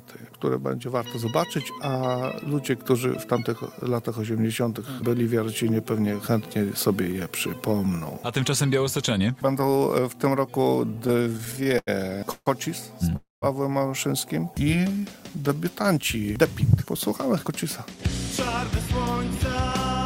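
From 10.95 to 11.89 s, repeated stalls (stutter) break the audio into about fifteen short holds, the longest 89 ms. The jitter buffer kept running dry and the receiver extended the last sound, adding 238 ms in total, about a quarter of that span.

At 12.31 to 12.48 s and 13.16 to 13.44 s there are two call audio freezes. The sound hangs as a fading buzz or hiss for 150 ms and then 259 ms, ending in 50 ms and 160 ms of silence before resuming. These are likely caused by packets held up in transit and an empty jitter buffer.

From 14.51 to 16.26 s, a jitter buffer slow-down repeats single pitch periods or bits of pauses to rebuild the buffer's reserve. This adds 198 ms, so the audio plays at 89% speed, drawn out but at unchanged pitch.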